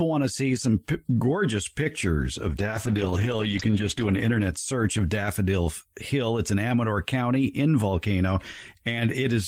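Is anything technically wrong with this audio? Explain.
Yes. From 2.51 s to 6.07 s the speech turns rough and watery, and it loses its brightness, sounding muffled for a stretch of about 1.2 s at its worst before clearing again. This is a call bitrate drop: the connection's bandwidth estimate fell, so the encoder was told to spend far fewer bits. It coded the speech more coarsely and trimmed the high frequencies, which fits a fall from about 32 kbps to about 12 kbps.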